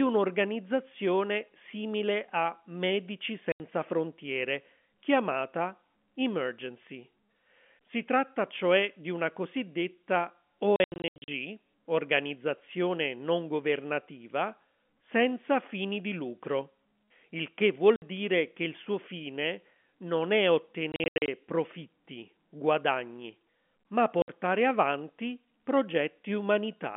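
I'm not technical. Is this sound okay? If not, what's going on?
No. There is packet loss filled with silence at 3.52 s, 10.76–11.28 s (before "organizzazione non governativa senza"), 17.96 s (between "il che" and "dire che il suo"), 20.92–21.28 s (after "suo fine non è") and 24.22 s. Chunks of the telephone-quality speech went missing in transit and were replaced by sudden gaps, in steps that fit 20 ms packets.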